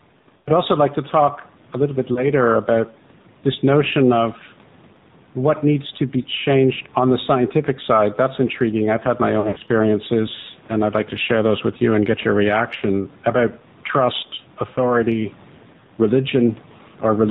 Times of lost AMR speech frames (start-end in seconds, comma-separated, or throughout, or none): 0.38-0.50, 2.14-2.30, 6.22-6.26, 9.40-9.62, 12.76-12.84, 14.74-14.79